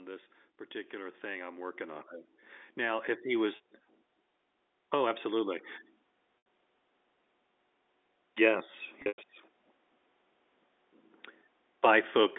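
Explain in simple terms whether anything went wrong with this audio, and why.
Two things went wrong. First, automatic gain rising: the call's level control decided the input was too quiet and turned it up gradually between 0.71 and 2.15 s, so the voice and the background noise swell louder together over about a second and a half.

Second, packet loss with pitch repetition: pieces of the audio were lost in transit, and the receiving end covered each gap by repeating the last bit of voice it had. At 3.56 s, just after "if he", a 40 ms gap sounds like a briefly held, buzzy tone. At 6.38 s an 80 ms gap holds and fades. From 9.02 to 9.18 s, 140 ms of losses, the longest lasting 100 ms, fade toward silence before the voice blends back in.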